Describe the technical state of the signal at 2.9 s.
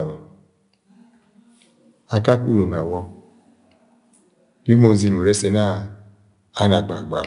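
At 2.9 s the speech carries 4-bit ADPCM compression, present throughout the clip. Each sample is coded as a coarse 4-bit step from a prediction, so level-following grit rides on loud syllables. A spectrogram shows a raised broadband noise floor tracking speech energy and nothing above 10.6 kHz, which fits a stream of about 89 kbps.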